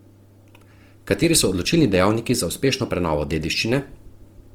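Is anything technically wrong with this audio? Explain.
Yes. Opus compression runs throughout the speech, the likely cause of its rough, grainy texture. With too few bits, the encoder's music mode keeps each band's energy but fills detail with noise or folded copies of lower bands, which fits roughly 24 kbps. Bandwidth stays full, reaching about 20.3 kHz.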